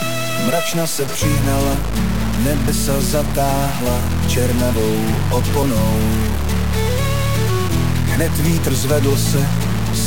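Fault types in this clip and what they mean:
Low bit depth without dither: heavy grain tracks the sound throughout, noise only about 10 dB under the signal, likely from truncating to around 4 bits.
Audio missing between chunks: short skips of roughly 50 ms at 2.68 s and 5.63 s, spaced 3 s apart, likely dropped at chunk boundaries.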